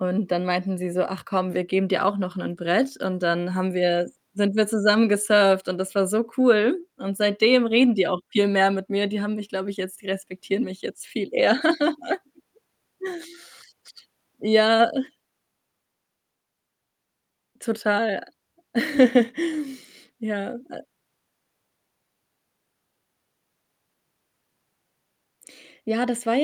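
No technical faults can be heard in this speech recording.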